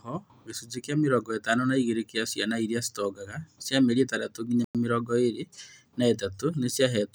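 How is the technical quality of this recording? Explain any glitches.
The recording has one audible glitch, a Bluetooth stall at 4.64 to 4.75 s. The speech drops to complete silence for about 100 ms, then resumes. The likely cause is radio interference delaying packets on the wireless link: the headphones' buffer emptied before retransmitted data arrived, so playback halted until the resent packets filled it again. The break is short and abrupt, a clean hole in the speech rather than a crackle or distortion.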